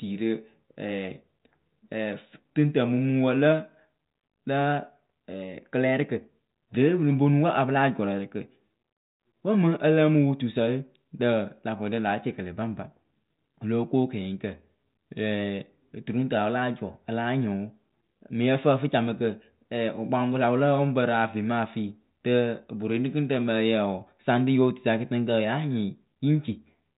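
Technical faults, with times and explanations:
No technical faults can be heard in this speech.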